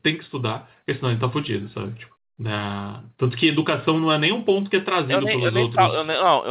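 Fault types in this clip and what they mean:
No faults in this clip.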